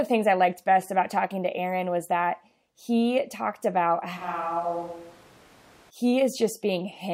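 Right after "that he talked about", at 4.19 s, the speech suddenly goes roomy and hollow, loses its bass and drops by around 10 dB, with background noise coming up to roughly 25 dB below the speech. That's most likely a switch to a distant microphone, with the close mic's signal lost and a farther-off one filling in. At 5.89 s it snaps straight back to the close sound.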